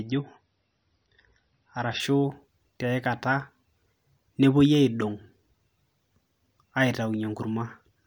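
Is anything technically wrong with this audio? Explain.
Yes. The first 2.0 s show an adaptive stream starting at a low bitrate: the speech is dull, with nothing above about 5.9 kHz and heavier codec smearing, which fits roughly a 24 kbit/s MP3. At 2.0 s it jumps cleanly to better quality, likely a 128 kbit/s stream.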